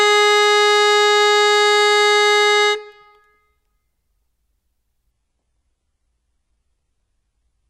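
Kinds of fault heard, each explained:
Adaptive stream at a lower bitrate: the connection slowed and the player switched to a much cheaper encoding of the same music, without any gap. From about 5.11 s to the end at 7.70 s, codec artefacts rise. The sudden drop fits a move from an AAC-LC stream at around 96 kbit/s to an HE-AAC stream at roughly 12 kbit/s.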